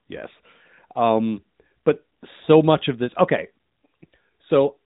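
No technical faults occur at any point in this speech, so there is nothing to describe in time order.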